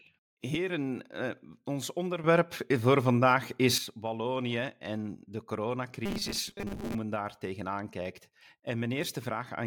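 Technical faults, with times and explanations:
2.24 to 3.78 s, sudden gain jump: The level rises abruptly by about 10 dB, then drops back at the end. Sound and background noise step up together. A gain change was likely applied from one sample to the next without a ramp.
6.06 to 6.95 s, robotic sound from repeated short buffers: The speech turns into a rigid, metallic buzz at 200 Hz. That rate fits a 5 ms chunk being looped. About half the audio seems replaced by repeats, likely because new buffers arrived too late.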